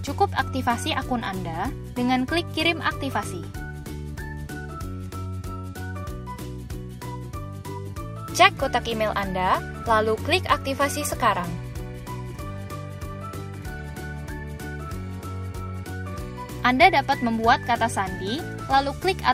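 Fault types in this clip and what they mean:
No technical faults can be heard anywhere in the audio; the signal holds steady, with no dropouts, distortion or interruptions.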